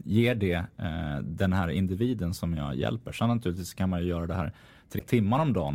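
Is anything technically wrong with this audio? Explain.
Yes. From 4.95 to 5.01 s, right after "ju göra det här", there is damaged data in the compressed stream. Some of the encoded bytes there are wrong, so the decoder can't read those frames properly, loses its place in the stream and has to hunt for the next valid frame header before it can resume. In this speech clip that 56 ms stretch comes out as a brief, harsh chirp or blip that breaks into the audio.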